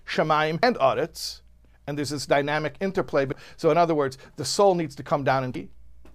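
At 0.63 s, 3.32 s and 5.55 s the speech is broken by brief glitches, each the signature of damaged data in a compressed stream. Bytes in the encoded stream were lost or overwritten, so the decoder misreads a frame, loses sync and hunts for the next valid header.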